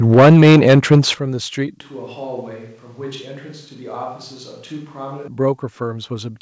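The microphone input was likely set too high, driving peaks about 8 dB past the converter's limit from 0.12 to 0.99 s. This microphone overload flattens the tops of a sizeable share of the waveform, giving the loudest syllables a harsh, crackly edge.

The call software likely reacted by stepping the microphone volume down in one jump at 0.14 s, by about 4 dB, and again at 1.14 s, by about 11 dB. Each time, the sound and its background drop abruptly in level, the second step far more noticeably.

From 1.81 to 5.28 s, the close microphone likely dropped out and a distant microphone took over. The sound turns hollow and roomy, with thinner bass, a level roughly 10 dB lower and room noise around 30 dB below the speech. Both the switch and the return are abrupt. Throughout, the G.722 call path keeps everything below 8 kHz.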